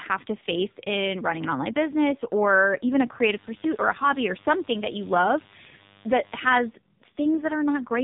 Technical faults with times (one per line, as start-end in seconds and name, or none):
0.00-8.03 AMR narrowband mobile codec
3.25-6.71 mains buzz